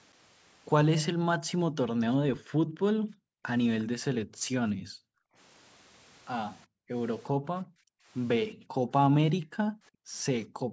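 From 1.1 to 5.35 s, the background is gated by the echo canceller. While the far end plays through the loudspeaker, the canceller pulls the microphone down hard. The room sound sinks by as much as about 40 dB. It drops away and comes back. Roughly three seconds of that stretch lose their background.

At 3.8 to 3.84 s, a brief scrap of echo slips through. It is very faint, around 30 dB under the speech. It trails the original by 356 ms. This is likely an echo leak: the far end's canceller failed to strip out everything its microphone caught from its own loudspeaker, and the remainder was sent back.

From 6.66 s to the end, the same gating returns. The background again falls by up to about 40 dB. About two seconds in total go quiet. The room sound cuts in and out as the canceller clamps and releases.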